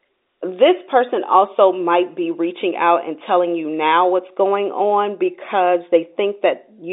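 Nothing stood out on listening to this speech clip.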